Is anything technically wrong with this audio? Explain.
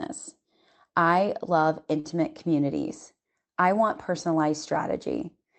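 Yes. A short stall from a late packet occurs from 1.99 to 2.07 s, just after "I love". A packet arrived late, so the jitter buffer ran empty. The receiver stretched the last sound by about 47 ms until it came, then resumed where it left off. Nothing is lost, but that sound is held too long and everything after it lands 47 ms later. The call path also limits the speech to about 8 kHz, which fits Opus at around 24 kbps.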